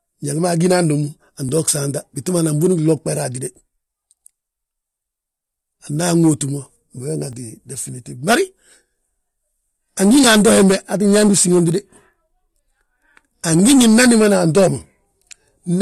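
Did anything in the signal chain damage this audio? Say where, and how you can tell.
Yes. Clock drift buffer slips show up at the driver or buffer stage. From 1.49 s to 13.17 s there is a regular click while the speech runs. It returns every 2.92 s, about five times in all. That steady spacing is the giveaway. The likely cause is two devices on separate clocks, mismatched by a few hundred parts per million. The buffer between them creeps until a few dozen samples are dropped or repeated.

There is also one loud pop, from 13.59 s to 13.62 s, just before "ngi nnan dimbana". It is a single sharp hit, a few dB above the speech, and the speech carries on underneath it. This is a voltage step or pulse added to the signal, likely in the analogue wiring or from a switch or driver glitch. It happens once and is not periodic, so it is separate from the slips.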